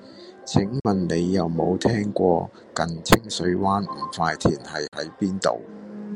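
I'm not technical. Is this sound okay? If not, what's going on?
No. The speech cuts out twice, at 0.80 to 0.85 s and at 4.87 to 4.93 s, each gap about 46 ms long. The likely cause is a Bluetooth dropout: the wireless link didn't deliver chunks of audio to the headphones in time, so they played silence. Each gap fits roughly two lost chunks. When the sound returns, it has skipped ahead, as though it kept playing during the silence.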